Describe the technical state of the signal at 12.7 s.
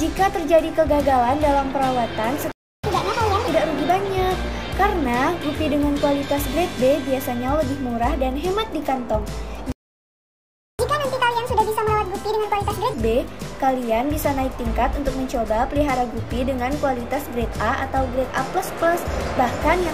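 At 12.7 s the sound is running fast and sharp, about one and a half times normal speed with pitch raised roughly seven semitones. This is catch-up at higher speed, from 10.79 to 12.94 s: after a stall, the player resamples its backlog to recover lost time.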